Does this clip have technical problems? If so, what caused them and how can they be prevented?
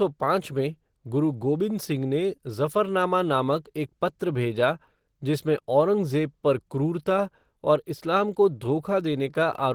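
Yes. Throughout, the speech sounds hoarse and grainy rather than swirly like MP3, the likely mark of Opus compression in hybrid mode, which fits a 16 kbps stream. Encoding at a higher bitrate would prevent it.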